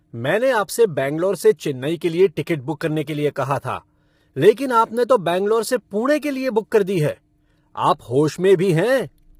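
Throughout the speech, the voice sounds rough and grainy, with noise filling the gaps between pitch harmonics. This is likely low-delay AAC compression (AAC-ELD). Its short frames resolve harmonics poorly, and damage this heavy points to a bitrate around 24 kbps.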